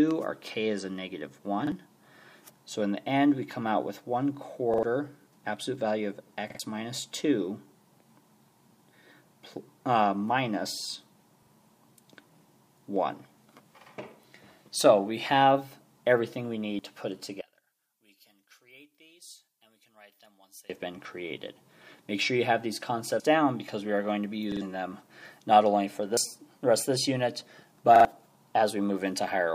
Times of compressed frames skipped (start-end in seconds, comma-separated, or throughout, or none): 16.79, 23.20, 26.17-26.26